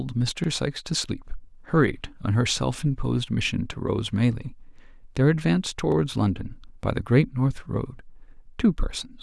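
At 0.44 s and again at 5.92 s, fresh audio failed to reach the playback device in time, so it replayed its previous buffer once. Each repeated buffer repeats a 40 ms slice of speech with hard joins, heard as a brief stutter, with no speech apparently dropped.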